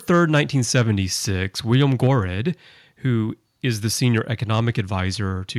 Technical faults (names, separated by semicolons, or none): microphone overload; microphone volume stepped down